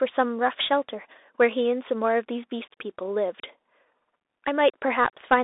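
A speech clip that runs its whole length through the Bluetooth CVSD headset codec, which fits a 64 kbit/s stream of single up-or-down bits with an adapting step. Plainly audible coding damage: a grainy hiss sits under the speech, and fast loud rises outrun the step size and smear. On a spectrogram the energy is confined to roughly 300 Hz to 3.7 kHz with nothing above 3.8 kHz, over a speckled noise floor. The waveform shows sloped, rounded edges on steep peaks.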